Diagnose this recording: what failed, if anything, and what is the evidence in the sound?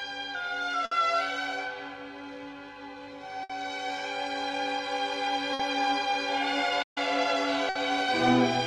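Burst of packet loss on the network at 0.85, 3.43, 5.53 and 7.69 s. Each time the last sound is stretched and faded for about 60 ms, then resumes with about 60 ms missing. A spectrogram shows repeated, decaying energy ending in a hard splice.

Playback stall from 6.82 to 6.98 s: the output drops to silence for about 136 ms, then carries on. The waveform shows a flat near-silent gap and the spectrogram a blank vertical band, likely from a player buffer underrun or a blocked output thread.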